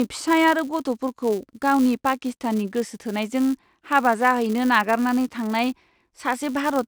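From start to finish, the speech carries a filter restarted on every block. The filter loses its memory at each block boundary and begins again from silence. Each fresh start leaves a small transient. These arrive 200 times per second, which points to blocks of about 5 ms. Heard together, they fuse into a steady 200 Hz buzz laid over the speech. The buzz rises and falls with the signal's level.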